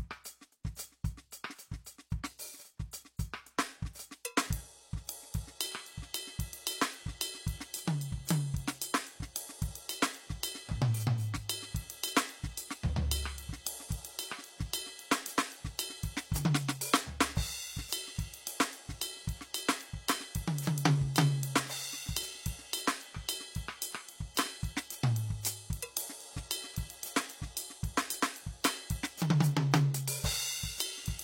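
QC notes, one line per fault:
2.91 s, pre-echo: a brief hiss about 15 ms long arrives just ahead of a sharp attack in the music, and the attack itself sounds softened. The codec spread quantisation noise across the whole transform block, so noise meant for the loud onset spilled into the quiet instant before it.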